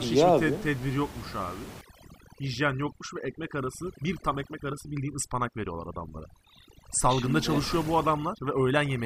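After "tedbir yokmuş abi", from 1.81 s onward, overdone noise removal cuts bands near the noise floor. Pauses drop and break up into twinkling specks rather than codec swirl.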